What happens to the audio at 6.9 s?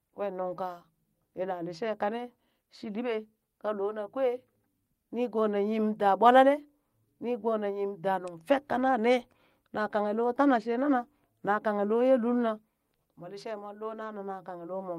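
Nothing goes wrong at 6.9 s; the audio is intact at that moment.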